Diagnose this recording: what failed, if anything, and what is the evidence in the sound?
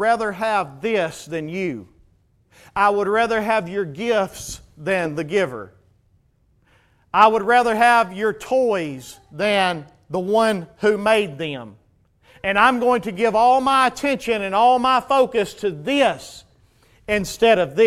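Nothing failed at any stage of the chain: the speech shows no audible defect anywhere in the recording.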